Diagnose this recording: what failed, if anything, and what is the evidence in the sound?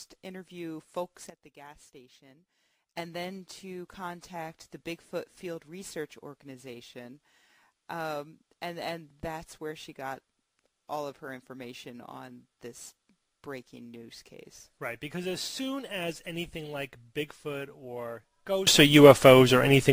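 Two sudden gain jumps, both in the digital gain stage. At 1.3 s the whole sound, background noise included, steps down by about 12 dB and snaps back at 2.97 s. Then at 18.67 s it leaps up by about 22 dB and stays there to the end. The noise floor moving in lockstep with everything else is the tell. The likely cause is a gain setting applied instantly from one sample to the next with no ramp.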